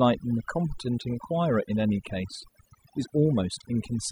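Throughout, the background drops and breaks up into twinkling specks: overdone noise removal, gating frequency bands together with softer speech detail.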